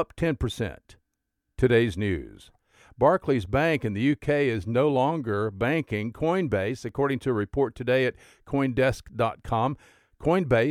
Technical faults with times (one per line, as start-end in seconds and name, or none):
6.89 block of digital silence